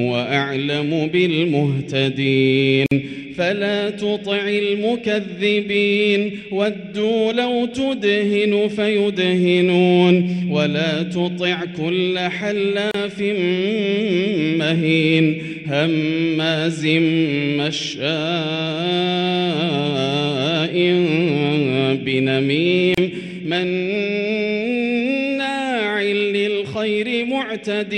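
The audio was encoded as separate pieces about 10 seconds long and joined without trimming, so each encoder's start-up delay and end-of-piece padding remain as a gap at a join of encoded pieces. Silence drops into otherwise continuous sound at 2.86 to 2.91 s (about 52 ms), 12.91 to 12.94 s (31 ms) and 22.94 to 22.98 s (31 ms). Each dropout has smeared edges, and the sound resumes where it left off.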